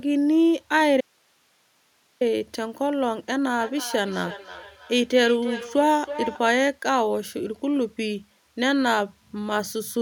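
A speech clip with two distinct faults. From 1.01 s to 2.21 s the speech cuts out abruptly for about 1.2 s, leaving only a thin bed of hiss around 40 dB below the speech before it snaps back mid-flow. That hard edge rules out a natural pause, and this is an audio dropout to a faint residue: the signal was likely lost upstream while the path after the break stayed live and kept passing its own noise. From 3.49 s to 6.56 s each phrase returns as a thinner, ringing repeat roughly a third of a second later, the loudest about 13 dB under the speech. This is feedback echo between two devices. A second device in the same room plays the call aloud, the first microphone picks it up again, and neither echo canceller removes sound that its own device didn't play.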